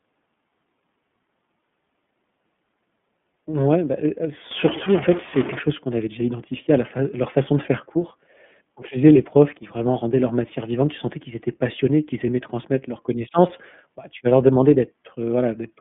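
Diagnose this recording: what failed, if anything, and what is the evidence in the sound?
The codec stage is degraded by iLBC coding throughout. Nothing above 3.7 kHz survives, and the band sits at roughly 150 Hz to 3.5 kHz. Speech sounds rough and synthetic. Each 30 ms frame is coded independently, which fits the 13.33 kbps mode.

A stuck bit appears from 4.51 to 5.59 s, after "bah elle elle" and ending before "chose qu'on avait déjà". The sound picks up distortion, with noise filling the gaps. One data bit is held fixed, likely by a faulty converter or data line, so sample values shift by its weight.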